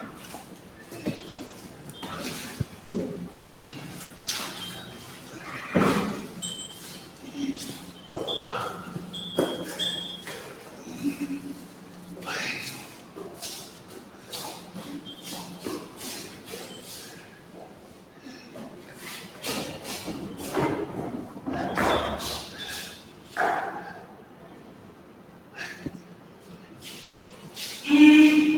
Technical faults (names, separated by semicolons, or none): noise suppressor applied to music or sounds; sound cut by the noise suppressor; repeated packet loss (robotic sound); long network dropout; lost packet rebuilt from error correction